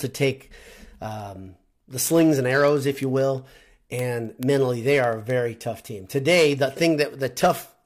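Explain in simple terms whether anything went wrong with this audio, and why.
Steady ticks, roughly ten a second, run from 0.15 to 7.84 s. These are word clock ticks, from two digital devices on mismatched clocks.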